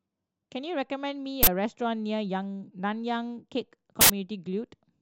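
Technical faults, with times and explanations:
1.43–1.47 s and 4.01–4.10 s, uninitialised buffer: stale memory played as audio gives loud digital noise bursts of 43 and 85 ms, not a dropout's silence.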